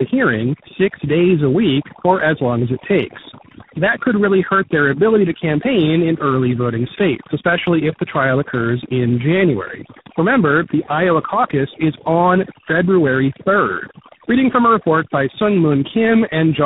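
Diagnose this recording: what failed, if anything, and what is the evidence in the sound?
Call processing applied overdone noise removal on a noisy source. The suppressor pulled individual frequency bands down to near nothing wherever they sat close to its noise estimate, and it made no distinction for the quieter parts of the speech in those bands. Across the whole clip the background collapses into near silence dotted with twinkling, chirpy specks, while the speech itself comes through with soft endings and low-level detail eaten away.

The codec stage shows tandem speech coding: the call was decoded and re-encoded at successive network borders, each coder working on the previous one's damaged output. The roughness, muffling and warble build up beyond what any single low-rate codec gives, consistent with around four speech coders in a row, such as AMR-NB and CVSD links ending in G.726. 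Throughout, nothing remains above 3.8 kHz, so the sound is narrowband and dull.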